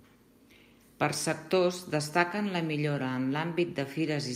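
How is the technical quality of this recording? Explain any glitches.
No technical glitches are audible anywhere in this speech recording, so there is nothing to explain.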